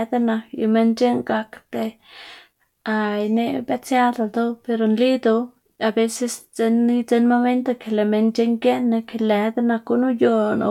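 A speech recording, and nothing is technically wrong with it.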